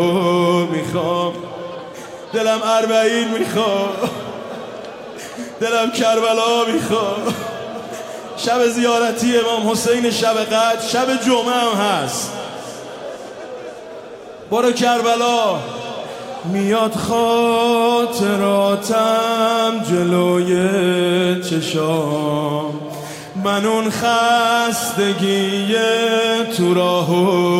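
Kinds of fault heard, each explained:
No technical faults are audible anywhere in the signal.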